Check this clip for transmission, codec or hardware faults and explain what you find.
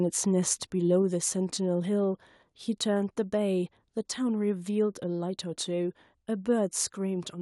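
The speech carries a microphone volume stepped down fault, three times: at 1.02 s (about 2 dB), 2.04 s and 3.06 s (about 1 dB each). At each point voice and background fall together in a single instant step and stay lower, as the call software likely cut the device's input volume. Unlike a smooth gain-control ramp, there is no gradual slide. Unlike a dropout, the sound never vanishes. It simply settles a notch quieter.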